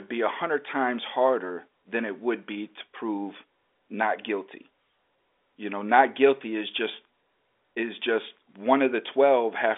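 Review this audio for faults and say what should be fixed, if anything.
Nothing should be fixed, as the review turns up no faults in this audio.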